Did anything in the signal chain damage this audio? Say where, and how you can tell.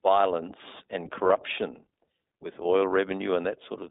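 Yes, the codec stage: it's iLBC. The audio is band-limited to roughly 250 Hz to 3.7 kHz and has that slightly rough, synthetic edge, which fits its 15.2 kbps, 20 ms frame mode.

There's also a network problem: lost iLBC frames from 1.28 to 1.31 s. That 20 ms gap points to a single dropped packet. The decoder filled it with a repeated, buzzy pitch cycle, then recovered immediately.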